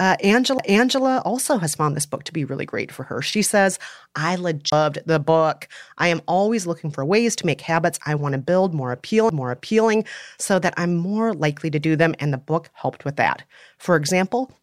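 CD skips occur at 0.58 s, before "also has found this"; at 4.70 to 4.72 s, between "says I" and "the book I am"; and at 9.29 s, after "I want to build". Each is a brief mute of about 5 to 20 ms as the laser jumps tracks, and the speech resumes from a different point.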